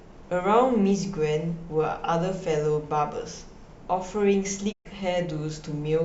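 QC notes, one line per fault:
4.71–4.87 s, digital broadcast dropout: the receiver lost the signal or rejected failed frames and muted until good ones returned, so the speech fades out over 20 ms into a 120 ms silence, which fits about five lost frames. That stretch is missing, not delayed.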